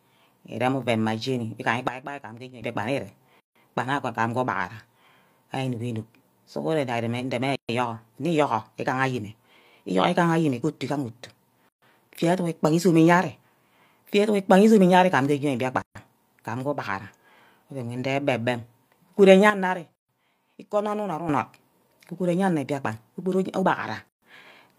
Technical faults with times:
1.88-2.62 sudden gain jump
3.40-3.55 gap at a join of encoded pieces
7.55-7.69 gap at a join of encoded pieces
11.69-11.82 gap at a join of encoded pieces
15.82-15.95 gap at a join of encoded pieces
19.50-21.29 sudden gain jump
19.95-20.09 gap at a join of encoded pieces
24.09-24.22 gap at a join of encoded pieces

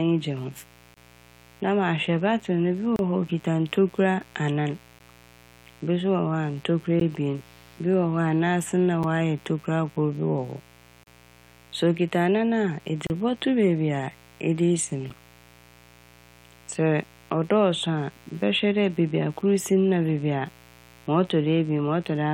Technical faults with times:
0.00-22.33 mains buzz
0.94-0.97 gap between stream segments
2.96-2.99 gap between stream segments
4.99 gap between stream segments
7.00 gap between stream segments
9.03 gap between stream segments
11.04-11.07 gap between stream segments
13.07-13.10 gap between stream segments
15.10 gap between stream segments

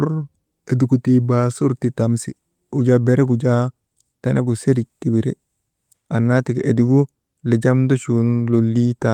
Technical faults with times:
none

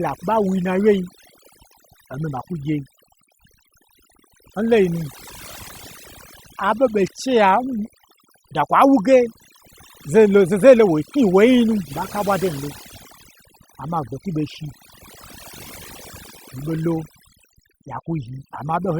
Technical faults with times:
0.00-18.99 overdone noise removal
11.87-11.92 stream segment skipped

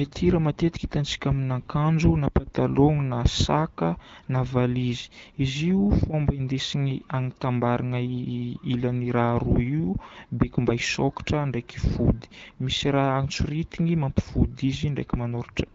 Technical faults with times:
none

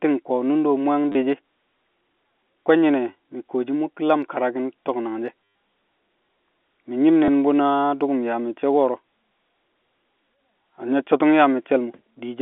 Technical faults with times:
1.12-1.15 packet loss with last packet repeated
5.44-5.55 packet loss with last packet repeated
7.25-7.28 packet loss with last packet repeated

